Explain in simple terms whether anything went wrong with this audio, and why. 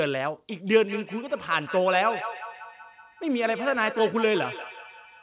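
From 0.5 s to the end of the clip, the speech comes back on itself roughly every fifth of a second. This is feedback echo between two devices: two devices in the same room are on one call, one plays what the other's microphone sent, and that microphone picks it up again. Each device's echo canceller only removes its own playback, so the repeats keep circling, each one quieter than the original speech.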